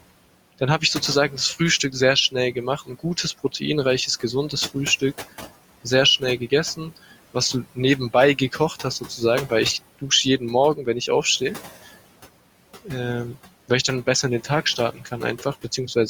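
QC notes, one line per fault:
Throughout: noise suppressor artifacts. The suppressor treats the room noise as steady background and cuts it by about 17 dB between phrases, so the residue pumps up under speech.
14.78 to 15.13 s: speech cut by the noise suppressor. Quiet speech was mistaken for noise and pulled down by up to about 11 dB, leaving around 150 ms sounding faint and swallowed.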